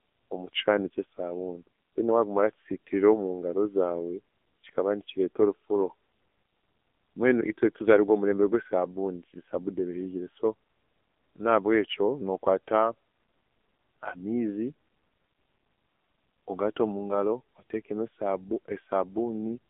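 AMR narrowband mobile codec damage runs throughout. The speech sits in a telephone band of 250 Hz to 3.6 kHz with nothing above 3.8 kHz, and heavy coding makes the voice buzzy and synthetic. This fits a low 6.7 kbps mode rebuilding speech from a sparse vocal-tract model.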